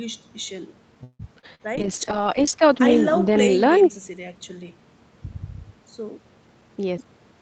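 At 1.03 s the speech stops moving forward for about 0.19 s. The last sound is stretched into a fading buzz or hiss, about 159 ms of fill in all, whose last 40 ms or so is silent, before the speech picks up exactly where it left off. No speech is lost. Only a gap is inserted. This is likely a call audio freeze: packets were held up, the jitter buffer emptied, and the receiver bridged the wait until they arrived.

Two instances of short concealed packet loss follow, from 1.39 to 1.46 s and from 1.55 to 1.62 s. In each, about 40 ms of audio never reached the decoder in time. The receiver covered the hole by extending the preceding sound, about 36 ms in the first case and 44 ms in the second, then crossfaded back to real audio. Each is heard as a brief smear or wobble, and a short consonant at either point can drop out.

From 1.79 to 5.25 s there is a call bitrate drop. The Opus encoder falls from 64 kbps to 9 kbps and stays at its lowest rate for about 1.4 s. 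With so few bits the speech is coded much more coarsely. It turns rough and watery, and the highs narrow well inside the 8 kHz ceiling the call path keeps at full rate. Clarity returns as the bitrate recovers toward the end of this stretch.

Between 6.48 and 7.12 s a jitter buffer speed-up shortens the speech. The buffer had grown beyond its target, so the receiver repeatedly cut out pitch-period-length slices, removing about a tenth of a second in total. Playback runs at about 113% speed with the pitch unchanged. The effect is a noticeably hurried delivery in that final stretch.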